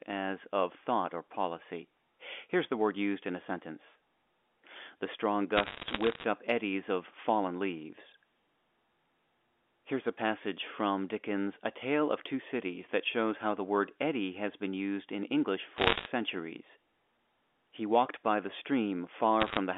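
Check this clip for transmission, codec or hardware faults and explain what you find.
Bit errors on a digital phone line, in three bursts: 5.56 to 6.24 s, 15.78 to 16.06 s, and 19.40 to 19.57 s. Corrupted bits on the line, around one percent of them, alter individual samples. A high-bit hit, or a sign-bit hit on a loud sample, gives a sharp tick, and clusters of these form crackle over the speech on the 64 kbps G.711 A-law line.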